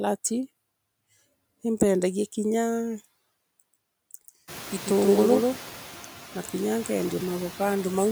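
A speech recording carries noise suppressor artifacts from start to finish. The background drops by about 14 dB in the gaps between phrases and swells back up beneath the speech. That pumping, which follows the speech level, is what sets it apart from codec smearing, which would not track pauses. The effect is easiest to hear after the room noise rises by about 19 dB around 4.5 s, since it then sits only about 18 dB below the speech. From 3.73 s to 5.57 s there is a doubled audio track: a full-band copy trails the original by roughly 150 ms at roughly 5 dB lower, starting and stopping abruptly. It has no decay tail or room colouring, which rules out acoustic echo or reverberation and points to the same audio likely being mixed in a second time through a slower path.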